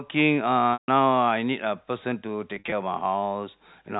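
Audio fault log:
0.73–0.88 s and 2.56–2.72 s, packet loss with pitch repetition: the first gap loses 150 ms in one stretch, and the second loses 100 ms scattered across 160 ms in runs of up to 50 ms, which fits 10 ms packets. The receiver fills each hole by repeating the last pitch period, so the sound briefly holds as a buzzy, static tone. On a spectrogram, the harmonics run as flat, unchanging lines. In the waveform, identical cycles repeat and shrink as they fade. The longer first gap decays toward silence before the sound cross-fades back in. The second shows several short frozen patches rather than one. All of this sits within the G.711 telephone band, with nothing drawn above 4 kHz.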